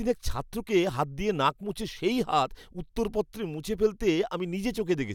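Nothing stood out as a technical problem anywhere in this speech recording on listening.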